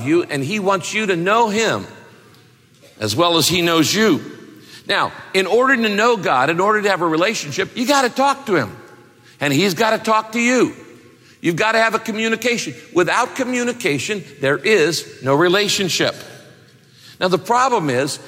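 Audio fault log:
No faults found anywhere in the clip.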